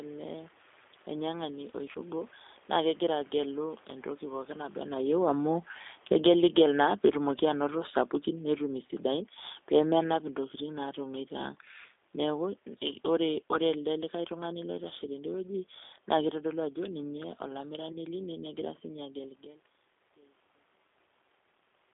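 Throughout, the speech passes through a low-rate G.729 codec that rebuilds it from a vocal tract filter and a few pulses per frame, consistent with 8 kbit/s. The band is held to roughly 300 Hz to 3.6 kHz, and the voice sounds plainly rough, thin and synthetic.

At 1.93 to 1.99 s, 8.87 to 8.90 s and 17.92 to 17.97 s, VoIP packet loss is concealed by the speech codec. Each gap fits a single lost 20 ms packet. The decoder extends the last sound, producing a brief buzzy or noisy smear that fades, then weak, distorted speech while it recovers.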